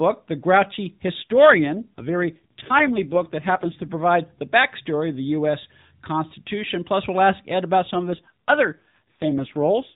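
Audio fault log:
1.22–3.98 s and 7.94–9.95 s, AMR rate drop: Twice the speech turns rougher, buzzier and more synthetic, the first stretch ending just before "the backstory of the". The band does not narrow and nothing drops out. The mobile codec has been pushed down to a lower rate, which fits a fall from 12.2 to about 5.9 kbps. Fewer bits leave a coarser model of the voice, so it buzzes until the rate recovers.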